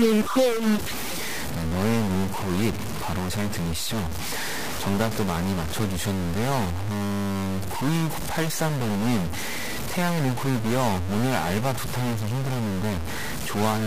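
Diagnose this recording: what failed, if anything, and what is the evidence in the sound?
A stuck bit, likely at the converter or its digital data lines, affects the whole recording. The speech has a harsh, buzzy distortion throughout. Pauses fill with noise instead of silence. One bit is held fixed, so about half the samples are off by a step near -25 dBFS. That is a fairly high bit, so the noise in the pauses is clearly audible.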